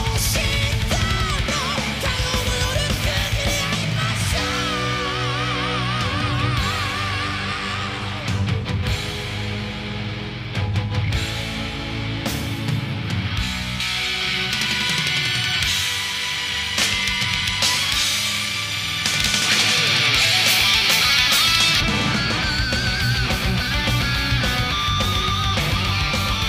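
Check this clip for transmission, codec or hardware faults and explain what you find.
One fault stands out, between 13.80 and 21.80 s: the sound turns thin, glassy and hissy at the top, with sharp sibilant edges. This is pre-emphasis left on. A J.17-style treble lift was applied for transmission but never undone, leaving 10 kHz about 11 dB hotter than 1 kHz.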